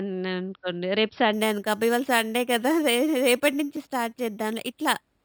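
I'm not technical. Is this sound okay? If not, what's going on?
No. From about 1.33 seconds to the end, the speech has imaging from sample-and-hold upsampling. The audio was stored at a low quality and then stretched to a higher one by simply repeating each sample, without smoothing. That adds a metallic, fizzy brightness sitting above the voice, mainly between 6 and 12 kHz. Unlike steady hiss, this fizz only appears while someone is talking, and it drops in pitch as the voice rises.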